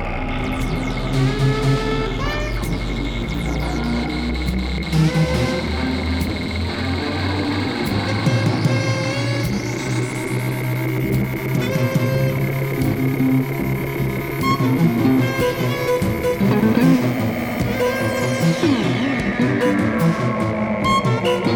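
At 3.24 s and again at 16.84 s there is a single sharp click. Each sounds like a case of dropped samples: a fraction of a millisecond of the stream is likely missing, so the waveform steps abruptly from one value to a later one instead of moving smoothly. Nothing audible is lost, only the discontinuity is heard. On a waveform each click is a tiny vertical step; on a spectrogram it is a thin vertical line spanning the frequency range.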